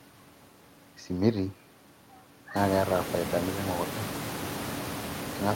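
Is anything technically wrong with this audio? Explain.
No, nothing in the signal points to a system fault; the background noise of the room rises by about 19 dB from around two and a half seconds in and then sits about 10 dB below the speech, but that is part of the recorded acoustic environment rather than something the system introduced.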